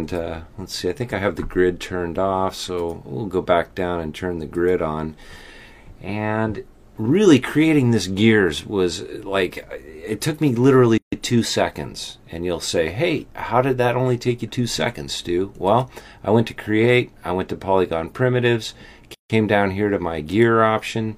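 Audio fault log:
10.98–11.12 s and 19.14–19.30 s, gap at a join of encoded pieces: continuous sound drops to silence for about 146 ms and 155 ms, then resumes where it stopped. This is encoder start delay and last-frame padding left untrimmed at the joins. On a waveform it appears as flat dead spans, and on a spectrogram as blank vertical bands with slightly smeared edges.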